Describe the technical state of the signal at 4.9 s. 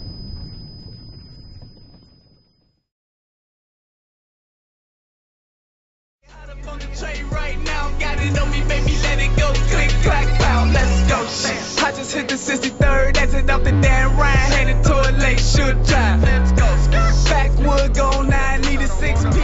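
At 4.9 s the signal is intact, with no audible fault at that moment.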